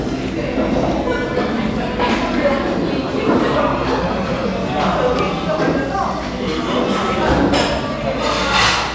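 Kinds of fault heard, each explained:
No technical faults can be heard anywhere in this recording of sounds. Nothing in the audio points to any problem to report.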